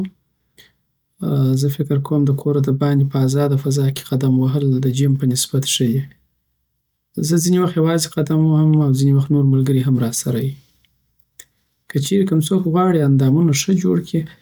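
No technical faults are audible.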